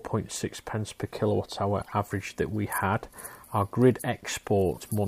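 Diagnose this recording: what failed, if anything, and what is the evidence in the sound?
The fault sits in the codec stage: corrupt frames were decoded. Two brief bursts of foreign energy, a squeaky, noisy blip from 1.80 to 1.93 s and a longer one from 4.73 to 4.90 s, each peaking around -30 dBFS, span what sounds like a handful of frames. Flipped bits made the decoder misread gains and spectral codes, placing energy at wrong frequencies. A spectrogram shows frame-aligned rectangular smears unrelated to surrounding content, and the waveform shows a short, abrupt envelope bump.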